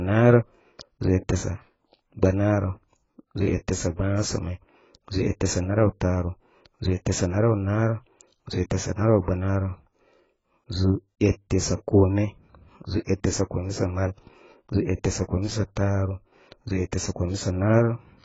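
Speech, heavily marked by AAC compression throughout: nothing above 7.6 kHz, with a dull, smeared, warbling texture, likely from AAC-LC at a very low bitrate near 16 kbps.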